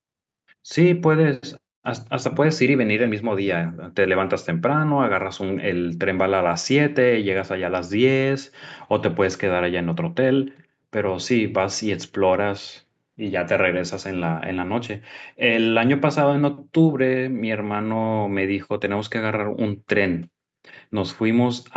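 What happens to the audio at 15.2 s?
Nothing goes wrong at 15.2 s; the speech there carries on intact, with only the ordinary narrowed top end of the call path, nothing above about 8 kHz.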